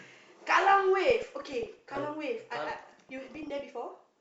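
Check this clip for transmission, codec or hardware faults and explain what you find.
Two bursts of DAB burbling, from 1.00 to 1.97 s and from 2.61 to 3.60 s. Bit errors at a fraction of a percent slip past error correction into the MP2 data, so corrupted scale factors make single sub-bands jump for a frame. The result is bursts of noise blips and sub-band level jumps over the speech. A spectrogram shows scattered rectangular blocks in isolated bands, and the waveform shows brief lumpy level jumps.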